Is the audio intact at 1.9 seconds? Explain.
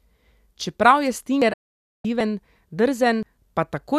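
No. The speech drops to silence from 1.53 to 2.05 s, a digital broadcast dropout where the receiver muted on failed frames, losing about half a second.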